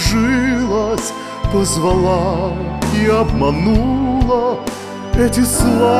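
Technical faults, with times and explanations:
No technical faults can be heard; the signal stays continuous and steady at every point in the recording.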